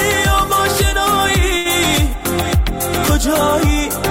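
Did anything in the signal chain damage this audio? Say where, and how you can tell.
Yes. At the network stage there is a short stall from a late packet, from 1.57 to 1.67 s. The sound at that point is held on for about 75 ms with a faint buzz or dip. Nothing is skipped afterwards: the audio resumes exactly where it paused, now running 75 ms late. That sets it apart from a lost packet, where a piece of the signal would be gone. Here the jitter buffer simply ran dry and the receiver stretched the last sound until the packet arrived.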